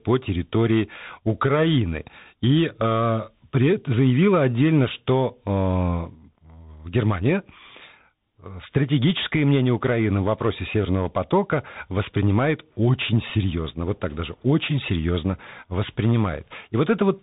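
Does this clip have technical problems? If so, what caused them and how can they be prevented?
Yes. Throughout the speech, the sound is narrow and muffled, with nothing above about 3.8 kHz. A granular hiss sits under it, s sounds come out scratchy, and louder, brighter moments break up into distortion. This is the Bluetooth CVSD headset codec: it sends one bit per sample, each saying only up or down, with an adapting step that can't keep pace with fast, loud changes. The damage fits a 64 kbps CVSD link. To prevent it, record on a wired microphone or set the headset to a wideband mode such as mSBC.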